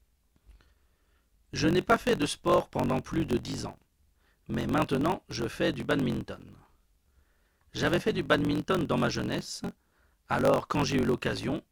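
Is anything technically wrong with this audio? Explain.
Yes. A block size mismatch (truncated) runs through the whole speech clip. One stage writes longer blocks than the next one reads, so the tail of every block is discarded. That causes a steady buzz at about 46.9 Hz, which fits a 1024-sample read size, and the speech runs about 1.12 times fast while keeping its timbre. On a waveform, discontinuities repeat every 21 ms or so. A spectrogram shows vertical lines at that spacing and a low harmonic comb starting near 47 Hz.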